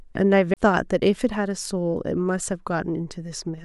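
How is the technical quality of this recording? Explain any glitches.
One glitch is audible. A CD skip occurs at 0.54 to 0.57 s. The laser jumped tracks, muting for about 30 ms, then the speech resumes abruptly from a different point after a short gap.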